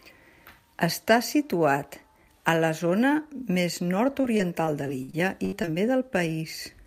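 Repeated packet loss (robotic sound) runs from 4.21 to 5.74 s of this speech. Audio data kept arriving late or not at all, producing ten short gaps across that stretch, the longest about 69 ms. Each gap was bridged by extending the sound just before it, about 268 ms of patched audio in total, roughly 18% of the span. The result is a stuttering, choppy sound with bits of speech dropped out.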